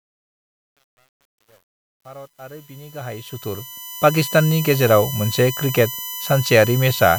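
A steady, fixed-pitch whine runs through the whole speech clip, built on 1 kHz with its strongest harmonic near 14 kHz, at about 15 dB below the signal. This is USB whine, from the bus's 1 ms frame current leaking in.

From 0.0 to 4.19 s, the smooth fade-in sounds gritty, worst until 3.43 s, before "गेजेराव मोनसे". This is truncation distortion on a fade, which fits an undithered stage keeping about 9 bits.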